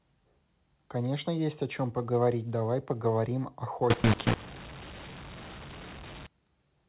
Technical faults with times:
3.90-6.26 mu-law and A-law mixed up

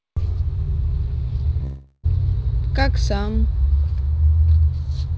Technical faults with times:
1.64-2.05 long network dropout

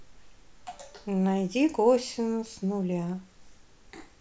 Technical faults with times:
none

